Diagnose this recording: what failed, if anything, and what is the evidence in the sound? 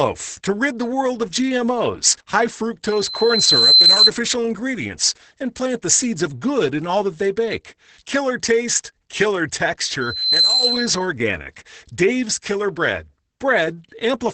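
Codec stage: Opus voice compression is applied across the whole clip. Nothing is present above about 8.9 kHz, consistent with Opus in SILK mode at wideband bandwidth, and the heavy coding damage fits a bitrate of around 10 kbps. SILK models speech with linear prediction and, at a rate this low, codes the excitation signal coarsely. The result is speech that sounds band-limited, hoarse and somewhat robotic throughout.

Acoustic loop ahead of the capture chain: a loudspeaker feedback squeal occurs twice, from 2.85 to 4.10 s and from 10.00 to 11.06 s. Both times it is a single tone at 4.1 kHz. The first event builds over roughly 0.7 s to about 10 dB above the speech. The second builds faster, over roughly 0.4 s, and peaks lower, at about 5 dB above the speech. The microphone was picking up a loudspeaker it was feeding, and at 4.1 kHz the loop gain went above one, so that frequency kept growing until the amplifier limited it or the loop was broken.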